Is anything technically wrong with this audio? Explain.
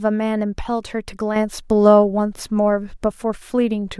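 Yes, there is a sudden gain jump at 1.36 s that lasts to the end of the clip. The digital gain was likely switched in a single step with no ramp, as when a level setting or bit shift takes effect between one sample and the next. The speech becomes abruptly louder by about 6 dB and stays there, and the background noise rises by the same amount at the same instant.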